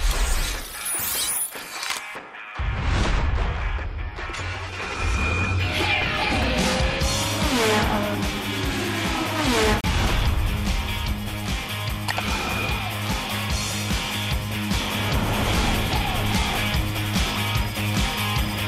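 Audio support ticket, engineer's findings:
Brief hard mute, 9.81 to 9.84 s; audio cuts to silence and resumes mid-programme, roughly 32 ms missing. Digital broadcast dropout at receiver/decoder: signal lost or frame failed checksum, output muted until next good frame. Gap length fits a single lost frame.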